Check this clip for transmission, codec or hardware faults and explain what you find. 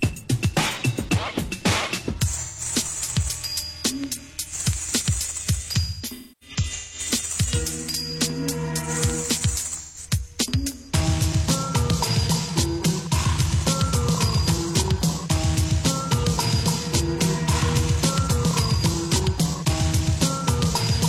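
There's AAC frame loss with concealment at 2.37–2.61 s, 5.76–6.99 s and 9.76–9.98 s. The decoder rebuilds missing frames from the last good spectrum, so the short gaps smear into phasey blurs, while the middle stretch has scattered dropouts, the longest around 300 ms, sagging toward silence and fading back.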